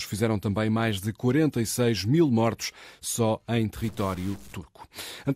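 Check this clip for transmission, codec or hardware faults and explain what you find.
One fault: from 3.84 to 4.53 s the speech turns distorted, the sound of a stuck bit, likely a single data bit held fixed. Samples jump by that bit's weight, so the waveform looks stepped and offset, with broadband spectrogram smearing and noise in gaps.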